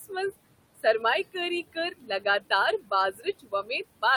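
Noise suppressor artifacts run through the whole clip: the suppressor pulls the room noise down by about 20 dB between phrases. Speech cut by the noise suppressor occurs at 0.00–0.12 s, 1.99–2.26 s, 2.80–2.92 s and 3.12–3.70 s. There, speech mistaken for noise drops by up to about 11, 13, 14 and 16 dB, leaving brief stretches, up to about a third of a second, sounding swallowed and faint. The room noise, about 16 dB below the speech, is what the suppressor is chasing.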